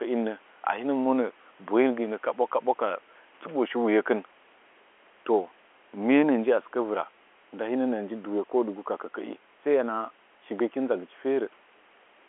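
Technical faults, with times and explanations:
No technical faults are heard in this clip.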